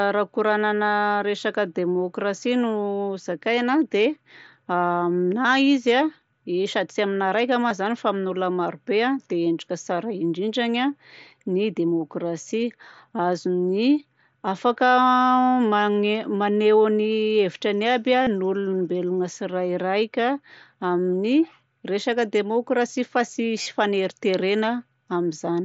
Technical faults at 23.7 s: concealed Bluetooth headset packet loss

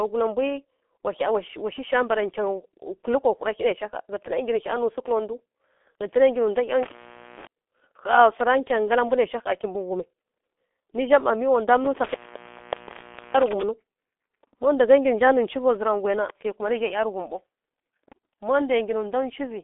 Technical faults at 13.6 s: G.723.1 codec; intermittent contact

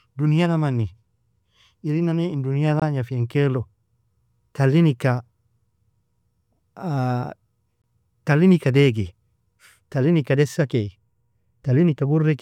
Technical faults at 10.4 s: none

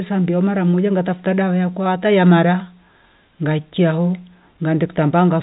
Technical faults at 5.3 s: none

